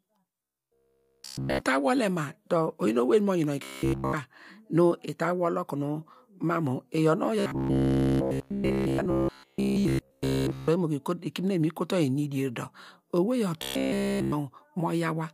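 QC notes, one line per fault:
0.43–1.62 s, 3.63–4.13 s, 7.40–10.68 s, 13.62–14.32 s: robotic sound from repeated short buffers. The speech turns into a stiff metallic buzz locked at 66.8 Hz, fully repeated audio, likely about 15 ms chunks looping while fresh samples arrive too late.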